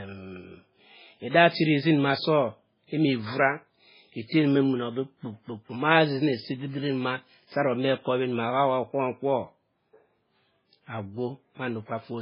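Throughout the recording, the speech has likely been squeezed through MP3 compression at a very low bitrate, with the sound pointing to something around 16 kbps. Starved of bits, the encoder throws away everything above 5.2 kHz and drops quieter frequency lines that then flicker in and out between frames. The result is a dull, band-limited voice with a watery, swirling texture, metallic chirping on s sounds, and consonant onsets that blur rather than snap.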